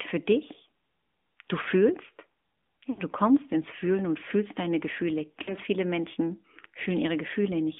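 The speech has been carried through the AMR narrowband mobile codec for the whole clip. The signal was squeezed into a telephone band of roughly 200 Hz to 3.5 kHz, and the vocal tract and pulse model rebuilt each stretch from a small bit budget. The result is a thin, boxy voice with plainly audible buzzy, synthetic coloring. The degree of damage fits a mid-rate mode of around 10 kbps.

From 2.90 to 3.01 s, lost AMR speech frames leave an 80 ms gap, consistent with four missing 20 ms frames. The decoder filled the gap by repeating the last good pitch and vocal tract settings at falling gain. The sound drags out and sags toward silence, then returns weak and rough. At 5.42 to 5.54 s the same concealment covers another 60 ms loss, giving a shorter smeared fade before the voice recovers.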